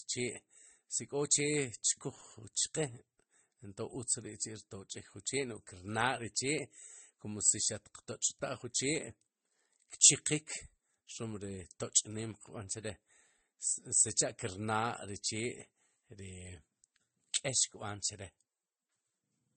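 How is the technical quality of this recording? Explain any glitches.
The quality is poor throughout, because the speech has been through more than one lossy codec. This is likely transcoding between lossy codecs, a low-bitrate MP3 re-encoded as Vorbis, so both sets of smearing and warbling artefacts stack. A spectrogram shows nothing above 8.4 kHz.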